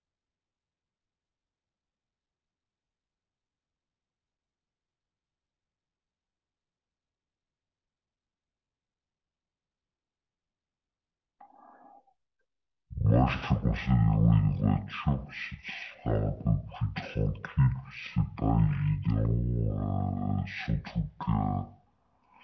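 From start to finish, the speech plays at half speed and an octave low. This is a wrong sample rate fault. The samples are being clocked out at half the rate they were captured at, with no conversion in between. Timing and pitch therefore drop together by the same factor. Every syllable is stretched to twice its length. Voices sound deep, slow and dragging. The halving fits audio recorded at 32 kHz but played back at 16 kHz.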